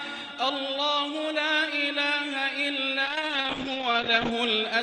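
Audio coming through a WebRTC call using Opus, clean enough at full bandwidth with content up to 12 kHz, until a call bitrate drop hits from 3.07 s to 4.37 s. The top end pulls back to about 8 kHz and the sound goes rough and watery for roughly a second and a quarter. It's the encoder being squeezed after the bandwidth estimate fell, which fits a drop from around 32 kbps to something near 8 kbps.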